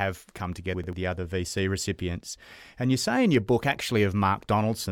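Between 0.74 and 0.93 s, just before "the other", chunks are out of order: one block of about 93 ms arrived a single chunk late and played after its successor. The speech briefly jumbles at the hard joins where the swapped pieces meet.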